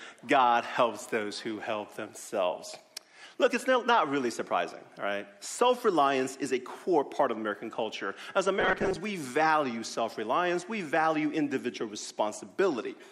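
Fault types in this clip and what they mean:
Robotic sound from repeated short buffers: From 8.60 to 8.97 s the sound turns into a rigid, metallic buzz near 188 Hz that still loosely tracks the material underneath. The likely cause is audio arriving too seldom, so playback repeats a slice about 5.3 ms long and roughly half the real signal is skipped. A waveform would show near-identical short cycles tiling that span, and a spectrogram would show evenly spaced harmonic stripes at multiples of 188 Hz.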